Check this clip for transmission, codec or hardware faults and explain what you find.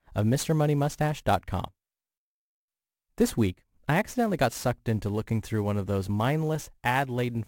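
There is one hardware fault, sample clock jitter, and it runs through the whole speech clip. The converter clock wanders by around 10 microseconds, so samples land early or late. Steep, loud passages suffer most. A rough hiss rides on the speech, about 25 dB down, and drops away in pauses.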